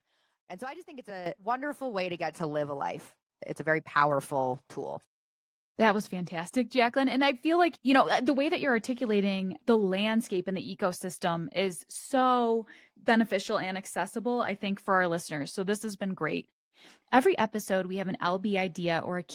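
At 1.26 s, between "I just think it's" and "wonderful way to", the microphone volume is stepped up by about 10 dB. Voice and background jump together, a sudden waveform height step.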